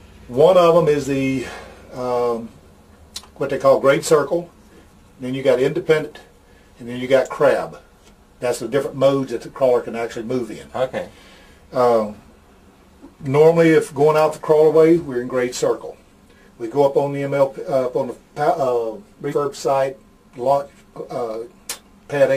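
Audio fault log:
5.99–6.04 s and 19.28–19.34 s, compressed frames skipped: whole coded frames, which fit a 46.4 ms frame length, were dropped (about one, then about two), so the audio jumps ahead by roughly 50 ms and then 100 ms, leaving an abrupt join.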